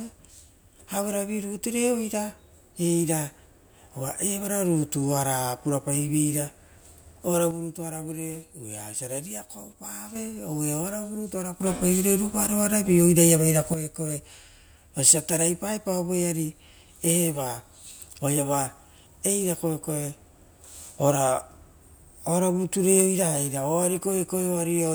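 A gain setting was likely switched without a ramp: at 7.51 s a sudden gain jump drops speech and background noise together by about 6 dB until 10.16 s, then from 11.61 s to 13.74 s both leap about 9 dB louder.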